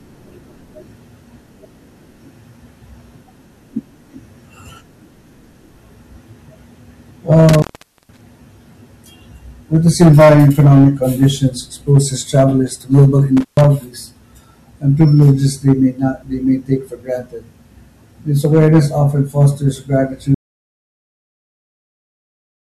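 A stage in the chain is being driven about 9 dB past what it can pass, so the speech suffers hard clipping from start to finish. Only a small share of samples, around one and a half percent, hit the ceiling, but each one has its peak sliced flat. Those squared-off tops add high harmonics, heard as a gritty crackle riding on the louder syllables throughout.

At 7.49 s a loose connection in the line opens, an intermittent contact that breaks the path for about 0.47 s before settling at 8.21 s. The speech vanishes under a short burst of crackle at each edge of the break, and faint hiss fills the hole.

The same contact fault returns at 13.37 s, just after "exposes travelers to global", this time open for about 0.13 s and recovering by 13.64 s. It is a quicker stutter: a crackle, a brief hissy gap, then the speech resumes.

From 20.35 s, right after "awareness often fosters", the input is lost, likely through a disconnected source or a failed link, while the recording keeps writing silence. 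This audio dropout to silence runs to the end of the clip. The speech stops mid-flow, and the gap is dead silence with no hiss or room tone left, so whatever followed is simply gone.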